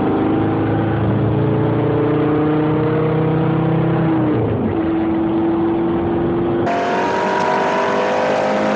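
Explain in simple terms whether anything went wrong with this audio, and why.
Audio read two samples at a time (double speed) starts at 6.67 s and lasts to the end, 8.75 s. The player treated each pair of samples as a single moment, so the sound races at twice its speed and jumps an octave higher.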